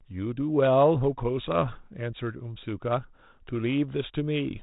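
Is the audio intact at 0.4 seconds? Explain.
Yes, the audio is intact at 0.4 seconds, with nothing there beyond the narrow telephone band of the G.726 ADPCM path at 32 kbit/s, which stops at about 3.8 kHz.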